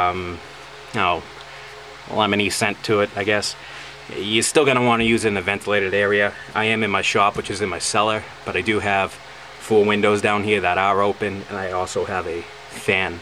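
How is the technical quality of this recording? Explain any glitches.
No glitches or faults heard.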